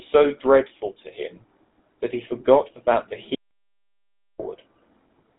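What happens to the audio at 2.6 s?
At 2.6 s, as throughout the clip, the speech carries GSM full-rate codec damage: a buzzy, gravelly roughness from pulse-driven vocal-tract modelling, which fits a 13 kbps rate. A spectrogram shows a flat ceiling near 3.8 kHz, with nothing above it.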